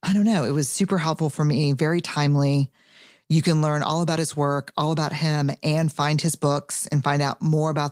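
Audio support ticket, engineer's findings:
No faults found in this speech recording.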